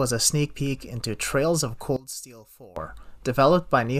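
From 1.96 to 2.76 s the speech drops sharply, by about 16 dB, and turns faint. The likely cause is one channel inverted. One side of the stereo pair has its polarity flipped. When the two sides are summed to mono, whatever they share cancels. Centred speech and low frequencies largely disappear. What remains is only the small difference between channels: a faint trace of the voice until normal level returns.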